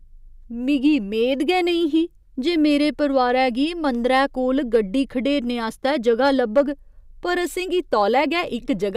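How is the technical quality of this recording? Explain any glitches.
The recording has two short stretches of hard clipping. At 4.75 s, and again from 6.08 to 6.61 s, the signal exceeds what a stage can pass by about 2 dB and then about 4 dB. The peaks are sliced flat, adding high harmonics heard as crackle, harsher in the longer second burst.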